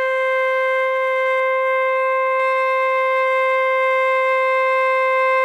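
It's a music clip, and from about 1.40 s to 2.40 s it goes hollow and phasey: classic channel delay, or comb filtering. One channel is running roughly 5 ms behind the other, and once the two get folded to mono, whatever they share cancels at regularly spaced frequencies. That puts the first notch somewhere around 100 Hz, with more stacked up above it, so the whole thing sounds scooped for that second.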